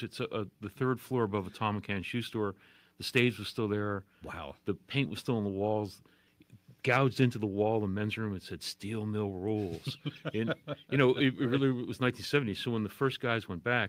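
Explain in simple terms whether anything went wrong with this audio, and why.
Something did go wrong, and it lasts the whole clip. The fault is clock drift between sender and receiver. The device that sent this audio kept time about 2 percent slower than the device that received it. So the sound arrived a little too slowly. The receiver's small waiting store of audio kept running low. To keep playing, it had to stretch things out. Nothing breaks outright. The timing just never quite settles.

You hear the result as repeated timing corrections, from 0.38 s to 13.76 s. The receiver keeps repeating tiny slices of sound to fill the gaps. Each repeat is very short. Together they add roughly 0.3 of a second overall. Playback runs at about 98 percent of normal speed. The repeats come at uneven spacing, so they show up as faint hiccups or a slightly wobbly pace rather than one clear glitch.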